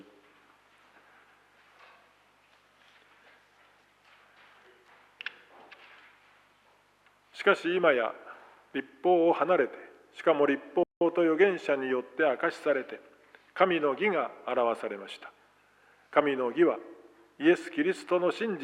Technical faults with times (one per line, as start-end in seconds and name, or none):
10.83-11.01 playback stall